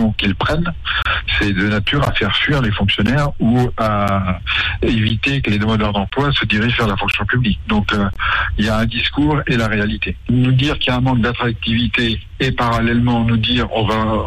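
Mismatched time stamps between one-second stream segments leave a gap between stream segments, which the player fills with hard-edged silence at 1.02, 2.05, 3.07, 4.08, 5.09, 6.10, 7.11 and 8.13 s. Each dropout lasts 10 to 30 ms, and no sound is lost.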